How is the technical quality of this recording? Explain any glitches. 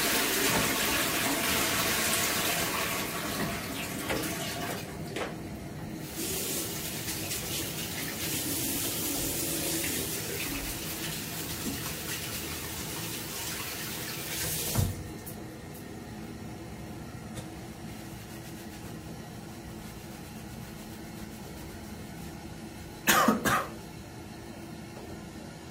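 No glitches can be heard anywhere in this recording of sounds. There is nothing here that needs explaining.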